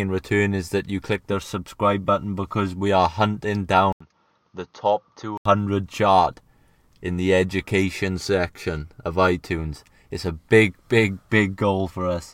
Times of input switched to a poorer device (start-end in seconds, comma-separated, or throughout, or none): 3.92-5.45